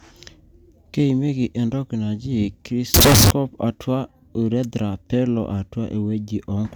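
A float-read-as-integer fault runs from 2.94 to 3.31 s, a burst of about 0.36 s in the speech. The cause is likely 32-bit floating-point samples being interpreted as 32-bit integers, so each sample's sign and exponent bits, not its actual amplitude, decide the output level. The waveform collapses into a near-square shape sitting at an almost fixed, high level. It sounds suddenly very loud and harsh, with background noise raised to the level of the speech, though the pitch contour still comes through.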